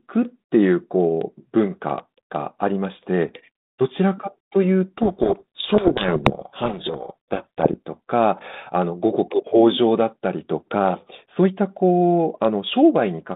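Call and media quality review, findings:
Harsh, grinding distortion burying the speech, 4.97–7.74 s. Probable component: G.726 decoder. Codec payload misread: code-word bit order reversed between ends, so each difference sample decodes wrong. Clears once packing matches. Surrounding narrowband G.726 path at 32 kbit/s shows only light quantisation hiss, band limited to about 150 Hz–3.7 kHz.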